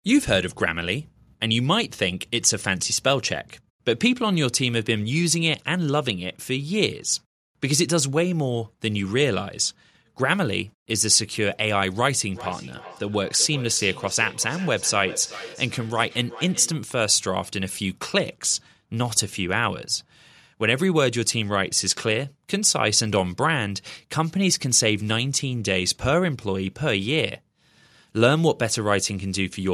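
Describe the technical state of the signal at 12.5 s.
At 12.5 s there is feedback echo between two devices (12.3 to 16.87 s). A second device in the room replays the call into a microphone whose echo canceller cannot remove it. Speech returns roughly every 0.4 s, thinner and ringing, about 16 dB below the speech.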